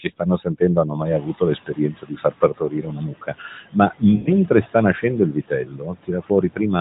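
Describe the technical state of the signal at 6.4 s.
At 6.4 s the speech sounds swallowed or faint in places. This is speech cut by the noise suppressor, in a stretch running from 5.32 s to 6.59 s. Within it, about half a second in total is affected, with the deepest drop about 18 dB. The suppressor mistook parts of the speech for background noise and pulled them down with it, so the quieter portions of the speech lose level along with the noise.

This moment also carries noise suppressor artifacts that run through the whole clip. The room noise, which rises at about 1 s, is pushed down by about 15 dB wherever the suppressor judges it to be steady noise. The noise therefore sinks in the gaps between words and comes back up under the speech. The suppressor makes this decision frame by frame across the frequency bands, so the background level follows the speech rather than holding steady.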